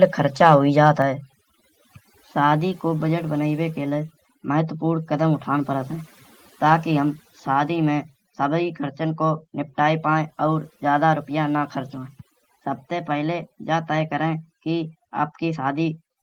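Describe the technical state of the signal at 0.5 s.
At 0.5 s, two faults overlap. From 0.43 to 0.55 s there is microphone overload. The peaks are flattened against the converter's ceiling, overshooting it by about 1 dB. Only a small fraction of samples is cut, but the squared-off tops add a brief harsh, crackling edge to the loudest part of the syllable. The input gain was likely set too high for this burst of speech.

Overdone noise removal runs through the whole clip, including this moment. The reduction was set so aggressively that frequency bands near the estimated noise level are pulled down or switched off entirely. Quiet parts of the voice fall below that threshold and vanish with the noise. The background drops and breaks up into twinkling specks.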